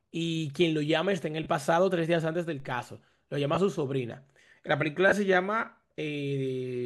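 Speech, with two kinds of fault. Lost LE Audio frames cause brief noisy smears at 1.43 s, 3.55 s and 5.09 s. The LC3 decoder stands in repeated spectra with scrambled phase. Gaps of about 30, 20 and 30 ms fit three, two and three 10 ms frames. A DC step at 2.60 s gives a low thump as the zero line jumps. The offset then decays, like a 2 Hz high-pass.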